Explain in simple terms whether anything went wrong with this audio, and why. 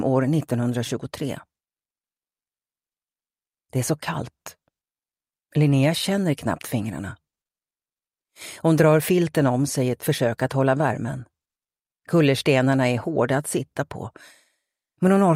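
Nothing stood out on listening to this recording as having gone wrong.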